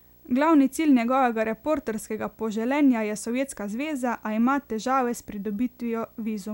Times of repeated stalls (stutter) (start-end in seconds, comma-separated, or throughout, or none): none